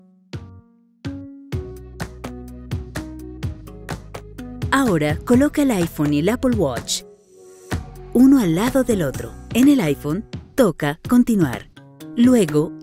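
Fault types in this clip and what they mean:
No technical faults are audible.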